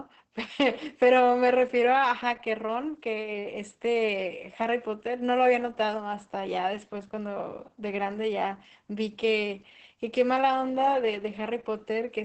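It's a speech clip carrying heavy Opus voice compression from start to finish. Nothing above about 8 kHz comes through, so the top end is gone, and the voice has that muffled, hoarse, slightly robotic edge you get when the SILK linear-prediction coder is starved and has to rough out the excitation. The sound points to SILK running wideband at a low rate, somewhere around 10 kbps, in 20 ms frames.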